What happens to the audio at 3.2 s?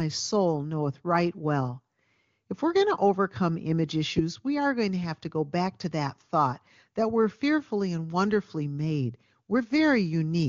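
Nothing goes wrong at 3.2 s: the speech there continues intact through the AMR wideband (HD Voice) codec, with no dropout, click or distortion at that moment.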